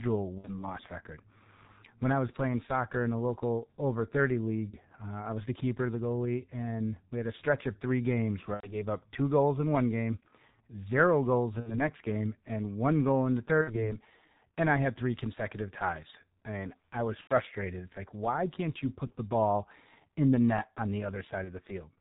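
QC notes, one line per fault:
Throughout, G.723.1 codec: heavy low-bitrate coding cuts everything above 4 kHz, so the speech is muffled and hoarse with smeared consonants, which fits roughly 6 kbit/s.
0.38, 4.70, 8.54 (after "stretch of three games"), 11.60, 13.61, 17.21, 19.08, 21.44 s, VoIP packet loss concealed by the speech codec: the decoder stretches the last sound into a buzzy tone or coloured noise that fades over 30 to 90 ms gaps, and the speech stays weak briefly afterwards.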